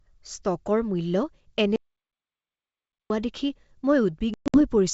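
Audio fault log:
1.76 to 3.10 s, audio dropout to silence: the speech stops dead mid-flow and the next 1.34 s is silence, with no room tone or hiss underneath, before the speech resumes just as abruptly. Whatever was said in that stretch is simply gone. Such a complete void, with no trace of the acoustic background, likely means the input was lost, through a disconnect, failed link or accidental mute, while the recorder kept writing silence.
4.34 to 4.62 s, packet loss on an ADPCM call: near the end the wideband G.722 speech breaks into hard-edged holes, about 180 ms missing in total across a 200 ms cluster, the longest single gap about 120 ms, which fits around ten lost packets. When the speech comes back it is slightly distorted, then settles, because the decoder's adaptive predictor and step size lost track of the sender's.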